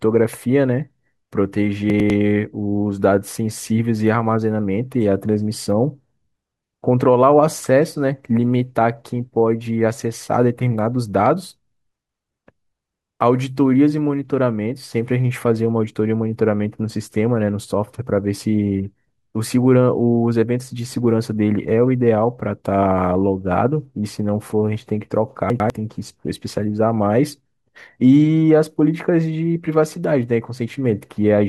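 Speech, with two brief jumbled moments at 1.9 to 2.1 s and again at 25.5 to 25.7 s. These are chunks out of order: a 100 ms block arrives one chunk late and plays after its successor, so nothing is missing but the sequence swaps, leaving hard joins.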